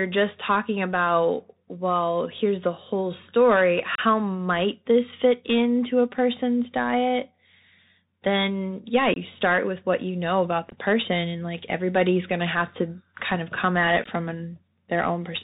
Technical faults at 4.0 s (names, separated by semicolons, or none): Bluetooth CVSD headset codec; unconcealed Bluetooth headset packet loss